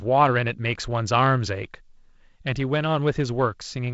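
Speech over a G.722 wideband telephone path at 48 kbit/s, band-limited to about 7.7 kHz with light coding noise, and no faults to report.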